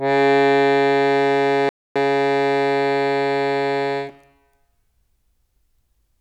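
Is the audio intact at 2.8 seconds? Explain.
No. At 2.8 seconds the music is inside a time-compressed catch-up running from 1.96 to 3.72 s. Here the player trims its backlog by dropping short slices and cross-fading the joins. The music plays about 1.15 times fast at unchanged pitch. On a spectrogram, harmonics stay at the same height while events crowd closer together. The waveform shows small seams where slices were joined.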